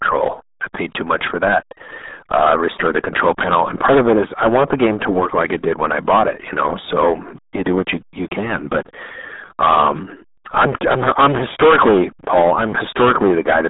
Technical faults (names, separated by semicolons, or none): hard clipping; RealAudio 14.4 codec